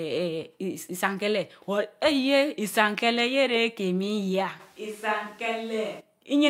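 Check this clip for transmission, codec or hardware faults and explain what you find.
One fault, near the end. From 4.61 to 5.99 s the speech abruptly turns hollow and roomy, with thinner bass, a level drop of about 5 dB, and room noise only around 30 dB below it. Then it snaps back. That's likely a switch to a distant microphone, which hears more room and less low end than a close one.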